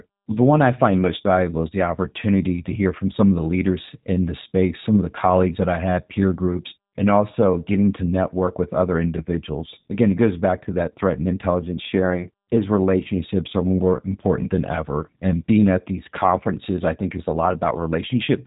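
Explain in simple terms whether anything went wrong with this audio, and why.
The whole clip went through the G.729 codec, a phone-call compressor. It cuts everything above 3.8 kHz, so the speech sounds dull, rough and slightly robotic.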